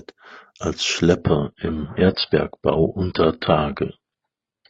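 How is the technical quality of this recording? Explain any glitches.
The quality drops partway through. From 1.21 s to the end, the speech plays as an adaptive stream at a lower bitrate. The player switched to a cheaper version of the stream, likely because the connection slowed. The change is abrupt, with no gap. Nothing above about 10.1 kHz survives, so the top end sounds dull. Coding artefacts become audible. The drop fits a move from roughly 96 kbit/s AAC down to about 16 kbit/s.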